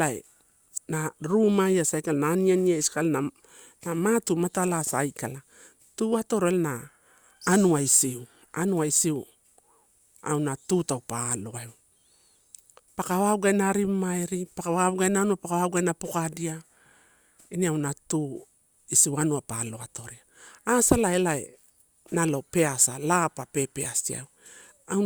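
No technical faults are audible anywhere in this speech.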